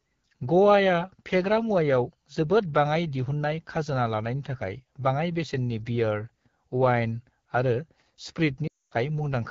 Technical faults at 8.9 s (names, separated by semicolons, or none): AMR wideband (HD Voice) codec; lost AMR speech frames